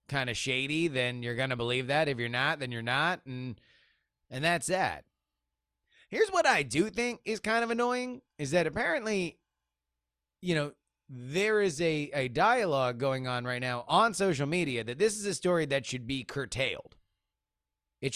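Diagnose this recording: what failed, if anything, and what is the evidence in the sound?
Nothing failed in this speech recording. No stage, from the wiring through to playback, leaves any trace that can be heard.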